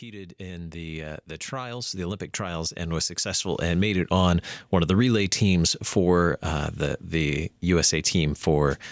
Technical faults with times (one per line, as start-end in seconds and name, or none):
0.05-4.39 automatic gain rising